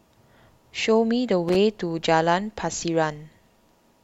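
A worn or dirty contact somewhere in the signal chain shifted between about 1.48 and 1.56 s, producing loose connector crackle in this speech recording. As the contact made and broke in quick succession, the signal was chopped on and off, and any DC present on the line turned each break into a pop. The result is a brief, irregular burst of scratchy crackle lasting roughly 80 ms, sitting over the speech.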